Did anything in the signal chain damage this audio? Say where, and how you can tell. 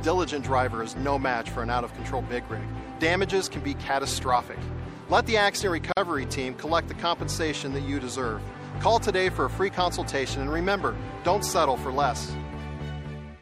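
Yes. MP3 compression damage runs through the whole clip at the codec stage. The sound turns watery and swirly, with metallic chirps on sibilant detail. This is plainly audible and points to a low-bitrate encode, likely around 64 kbps.

A gap at a join of encoded pieces sits at the storage or editing stage. A 45 ms gap opens from 5.92 to 5.97 s, with smeared edges. The sound then resumes where it stopped. The encoder's start delay and end padding were left in at the join.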